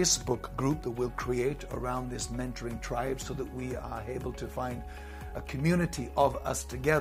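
At 5.29 s to 5.33 s there is an AAC frame loss with concealment. About 21 ms of audio went missing, which fits a single lost frame. The decoder rebuilt the gap from the last good spectrum, leaving a brief smeared, noisy or phasey patch.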